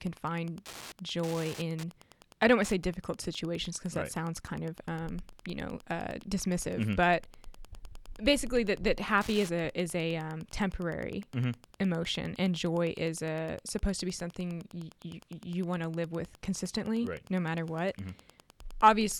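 Wi-Fi interference runs through the whole speech clip as a steady ticking about ten times a second, sitting roughly 25 dB below the speech. A nearby Wi-Fi radio's beacon, repeating every 102.4 ms, is being picked up and rectified by the audio circuit.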